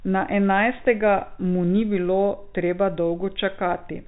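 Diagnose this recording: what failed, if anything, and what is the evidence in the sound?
Nothing failed; the telephone-band speech sounds intact.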